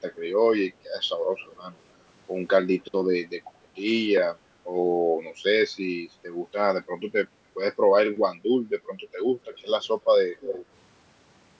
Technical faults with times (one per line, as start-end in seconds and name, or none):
1.38-1.77 echo leak
9.53-9.85 echo leak
10.40-10.66 echo leak